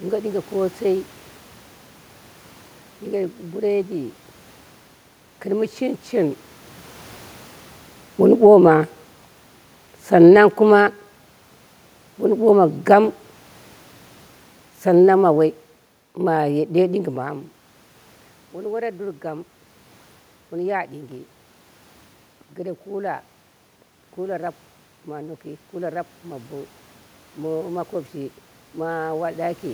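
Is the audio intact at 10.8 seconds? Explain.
No, automatic gain falling runs from 6.13 to 17.03 s: the control lowers its gain by about 10 dB, so the room noise sinks with the speech, unlike a talker moving.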